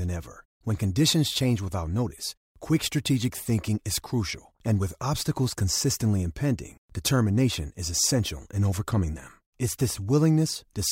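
A speech clip with CD scratch ticks from 9.18 to 9.90 s, just after "is essential in overcoming": four ticks, the longest around a millisecond, recurring once per disc revolution where a blemish defeats error correction. They appear as thin vertical spectrogram lines and tiny waveform notches.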